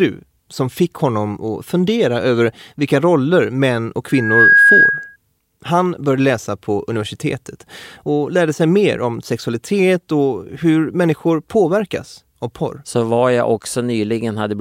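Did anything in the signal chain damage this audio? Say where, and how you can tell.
Yes. Loudspeaker feedback squeal occurs at the analogue stage, right after "vilka roller män och". From 4.08 to 5.16 s a steady 1.6 kHz tone swells within about a third of a second to roughly 10 dB above the speech. The microphone is picking up its own loudspeaker, and the loop gain exceeds one at that frequency.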